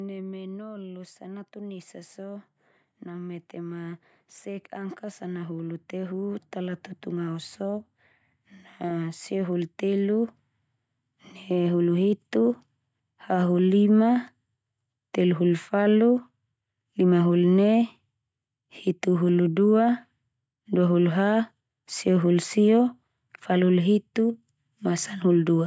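From 3.05 s to 10.34 s the level climbs steadily by about 13 dB, voice and background swelling together. This is automatic gain rising: the gain control judged the input too quiet and slowly raised its gain, lifting everything it passed, not just the speech.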